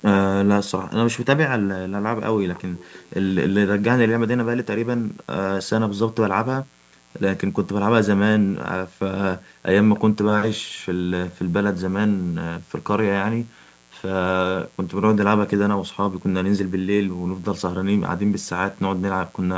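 A mains buzz runs through the whole speech clip. It is low but steady, with a raspy edge. The fundamental is 60 Hz, and a long row of harmonics climbs into the kilohertz range. That points to sharp switching spikes, from a dimmer, a rectifier or an unshielded lead, entering the signal twice per mains cycle. The spikes are what make it sound gritty rather than like a smooth hum.

From 2.46 to 3.34 s, a faint delayed copy of the speech trails the original by about 309 ms. It is well below the main speech. This is an echo leak, likely from a far-end loudspeaker whose echo canceller let some of the signal back through the microphone. A second, very brief scrap with the same 309 ms delay appears from 9.95 to 10.0 s.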